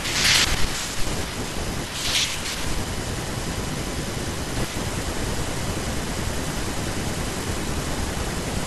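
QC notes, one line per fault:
Throughout, USB whine: a steady, fixed-pitch tone sits under the speech, built on 1 kHz, with its strongest component at 3 kHz, the third multiple. It runs at roughly 20 dB below the speech. The bus draws current in regular 1 ms frames, and those pulses leak into the audio path through shared power or ground, so the frame rate and its multiples are heard as a constant whine.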